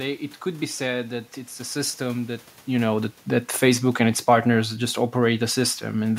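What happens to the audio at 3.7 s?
The speech and its room noise are sinking together, by about 4 dB from 2.67 s to 6.14 s after "it's a system that", as automatic gain falling eases down the level.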